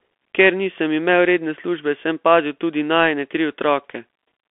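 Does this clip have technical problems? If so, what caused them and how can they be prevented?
Yes. The speech has passed through a Bluetooth CVSD headset codec for its whole length. The band runs only from about 250 Hz to 3.4 kHz, so the sound is thin and boxy. CVSD sends one bit per sample, saying only up or down, with a step size that adapts, which fits a 64 kbps CVSD stream. Fast, loud high content outruns the step. S sounds turn scratchy, and a grainy hiss sits under the speech. To prevent it, record through a wired microphone or a headset using a wideband Bluetooth codec.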